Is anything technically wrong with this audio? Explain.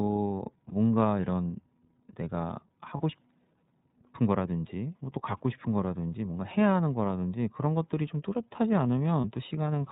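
Yes, a couple of things. The whole clip of speech has gone through the iLBC codec, and the damage is plainly audible. It's narrowband, so nothing above 4 kHz survives, and the voice comes across clear but a bit rough and synthetic. iLBC codes each frame's excitation on its own rather than predicting from the previous one, which costs some naturalness. The character fits the 13.33 kbps mode with 30 ms frames.

On top of that there are three spots with lost iLBC frames: 0.68 to 0.73 s, 2.97 to 3.01 s, and 9.21 to 9.25 s. Each looks like a single dropped frame of about 30 ms. The decoder covers the hole by repeating the last pitch cycle with some noise mixed in, so you hear a brief held, slightly buzzy or breathy vowel. Because the frames stand alone, the voice snaps back almost immediately afterwards.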